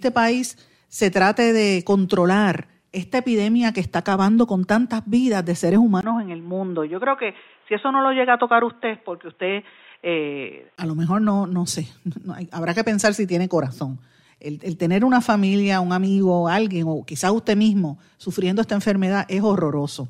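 Speech, with the input likely switched to a poorer device from 6.01 to 10.78 s. After "tantas vidas de seres", a 20 ms gap leads into dull, boxy sound with nothing above 3.8 kHz. It is about 5 dB quieter, with new background noise well below it. Full sound returns by "lo mejor no no".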